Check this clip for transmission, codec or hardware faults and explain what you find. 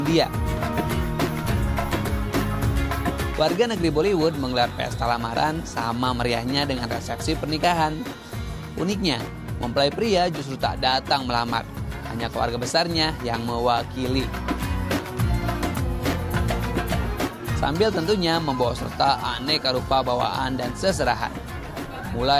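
The check turns up no transmission, codec or hardware faults in this clip.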